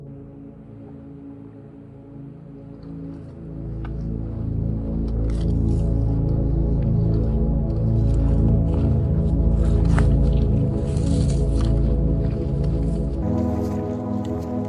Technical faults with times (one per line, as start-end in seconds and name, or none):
0.00-13.22 wrong sample rate